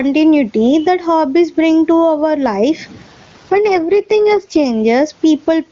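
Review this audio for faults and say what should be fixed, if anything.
Throughout the clip the level pumps, with a swing of roughly 20 dB, so loud and quiet passages sit unnaturally close together and the speech sounds squashed. This is gain pumping. The likely cause is input gain set far too high for the microphone, with a fast limiter or compressor clamping down on each peak and releasing in the gaps. To prevent it, lower the microphone gain so the limiter rarely engages, and use gentler compression.

From 2.91 s to 4.65 s, just after "bring to our life", the speech turns rougher and more synthetic. There is no dropout and no loss of bandwidth, and the clearer quality returns once the stretch ends. This is an AMR rate drop. A weak radio link forced the AMR-WB coder down from its top mode to a much lower one, and the rougher texture fits a fall from about 23.85 to about 8.85 kbit/s. To prevent it, improve the radio link, or hold the codec at a higher minimum rate where the network allows it.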